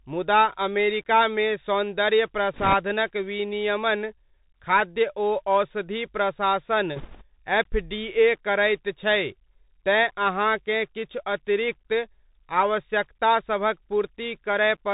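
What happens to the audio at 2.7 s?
Bit errors on a Bluetooth voice link hit the speech from 2.54 to 2.74 s, just after "मुदा अमेरिकामे सौन्दर्य". Flipped bits, at a rate of a few percent, each nudge the slope-tracking decoder off course and then fade out. The result is a brief rushing crackle over the speech. Unlike packet loss or digital dropouts, there is no silent gap and no sharp click.

The error burst sits on top of the Bluetooth CVSD headset codec, which runs through the whole clip. CVSD sends one up-or-down bit per sample with an adaptive step, consistent with a 64 kbit/s link. This leaves nothing above 4 kHz, roughens sibilants and adds a steady granular hiss, unlike the short crackle at 2.7 s.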